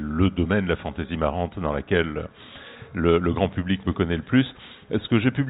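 No technical faults are audible anywhere in this audio.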